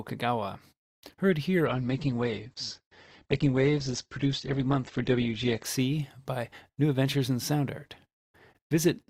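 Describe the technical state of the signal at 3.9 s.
At 3.9 s the speech is inside a stretch of adaptive stream at a lower bitrate, running from 1.66 s, just after "heard here", to 5.66 s. The player switched to a leaner encoding when throughput fell, so nothing is left above about 8.2 kHz, the top end turns dull, and coding artefacts rise. The quality changes abruptly at both edges with no gap, which fits a drop from roughly 64 to 12 kbit/s Opus.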